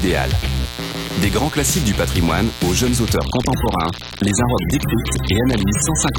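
A mains buzz runs through the whole clip: a steady, raspy tone built on 60 Hz, sitting fairly high at around 15 dB below the sound itself. Sharp switching spikes from something like a dimmer, rectifier or unshielded run were picked up twice per mains cycle, so the buzz is not a clean hum. Its harmonics stack up through the low and mid range and extend up to several kHz, giving it that grainy, edged character.

From 3.16 s to the end, the adaptive stream switches to a lower bitrate. The quality drops abruptly with no gap or dropout, and codec artefacts rise. The player has stepped down to a cheaper rendition of the same AAC stream, likely because the connection slowed. The degree of loss fits a fall from roughly 96 kbit/s to somewhere near 27 kbit/s.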